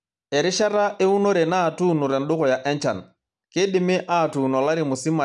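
A short speech recording, and nothing in it stood out as a technical problem on listening.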